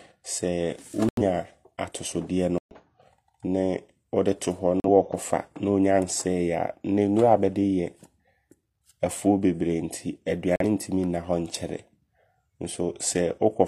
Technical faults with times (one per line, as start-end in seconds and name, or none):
1.08-1.21 corrupt frame muted
2.58-2.75 corrupt frame muted
4.80-4.89 corrupt frame muted
10.56-10.65 corrupt frame muted